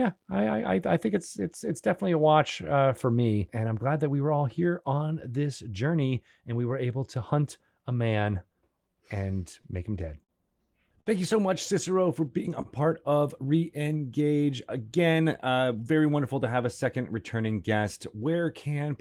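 Four short stalls from late packets show up in the speech at 9.61, 10.24, 11.01 and 12.62 s. Each time a packet was late, the jitter buffer ran dry, and the receiver held the last sound for 26, 46, 52 and 30 ms before carrying on. Nothing gets lost; you just hear a brief stretched, slightly buzzy hang, the first right before "make him dead" and the last just after "for being a". Then from 14.70 to 15.75 s there's a jitter buffer speed-up: the buffer had built up extra delay, so the receiver trimmed tiny pitch-period slices to catch up, shaving off roughly 70 ms. The speech runs about 6% fast at the same pitch and sounds a bit rushed going into "wonderful to have a".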